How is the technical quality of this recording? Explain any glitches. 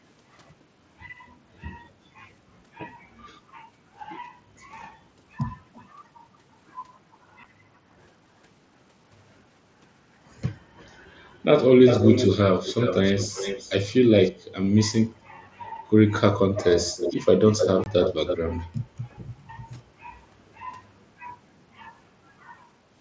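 The recording has two kinds of glitch: a faint-to-strong delayed repeat of the speech and two brief dropouts.

Echo leak at 5.74–5.89, 7.12–7.17, 10.77–10.94, 11.85–13.7, 14.25–14.31 and 16.57–18.37 s: a copy trails the speech by roughly 310–371 ms, faint at first and nearly as loud as the speech at 11.85–13.7 s. The likely cause is a far-end loudspeaker whose echo canceller let its microphone pickup return.

Unconcealed Bluetooth headset packet loss at 7.44 s (7.5 ms) and 17.84–17.86 s (22.5 ms): lost headset frames were replaced with silence or an idle pattern, leaving abrupt holes, the second within the loud echo.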